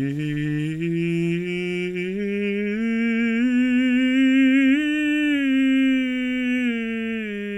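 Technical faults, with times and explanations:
Nothing technical stands out in this bit of music; there's no fault to flag anywhere in it.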